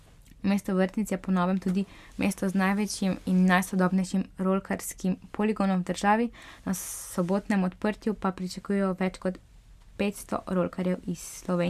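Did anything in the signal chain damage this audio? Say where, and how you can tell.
No, nothing stood out on listening that would point to damage at any stage of the signal chain.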